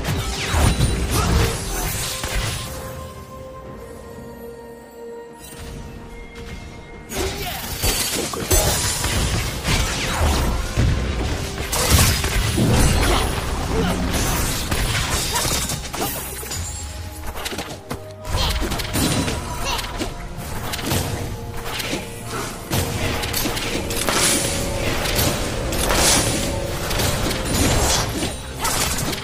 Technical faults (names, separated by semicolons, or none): frames out of order; doubled audio track